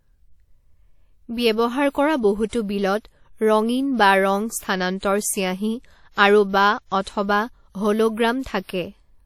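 Codec damage is plainly audible across the whole speech clip. Nothing is heard above 18.6 kHz. Quantisation noise smears around each sound, leaving a ringing, washy edge and a hiss that rises and falls with the signal. The likely cause is WMA compression at a low bitrate, which fits about 48 kbps.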